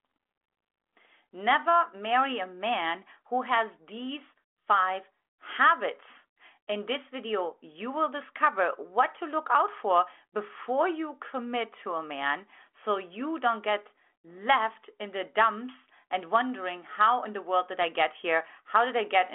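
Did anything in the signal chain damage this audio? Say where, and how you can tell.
No, nothing in the chain damaged this speech; it passes through a G.726 ADPCM telephone link at 40 kbit/s, which limits it to the 300 Hz to 3.4 kHz line band with nothing above 3.8 kHz, exactly as that path is meant to behave.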